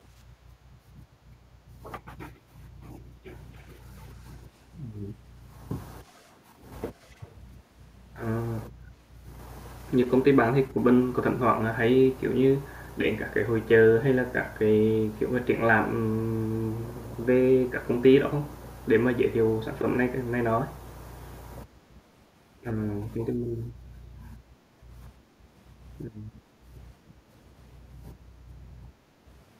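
Likely an echo canceller at a loudspeaker end failing to remove all it picked up, sending an echo leak back: faint copies of the speech, delayed 284 ms and about 35 to 40 dB down, surface as brief ghostly scraps at 3.55, 4.27, 6.05, 7.0 and 9.83 s.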